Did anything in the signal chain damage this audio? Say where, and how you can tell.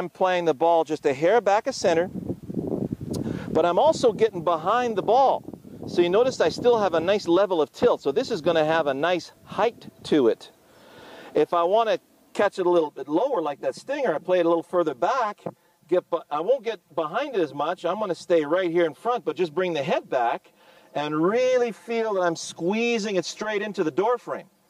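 Yes. Channel delay (comb filtering) starts at 12.56 s and lasts to the end. From that point the sound turns hollow and phasey, with fixed dips in the spectrum, the lowest near 100 Hz and more spaced evenly above it. One channel arrives roughly 5 ms late, which points to a buffer or driver stage, and when the two channels are summed to mono, the shared content cancels at those regularly spaced frequencies.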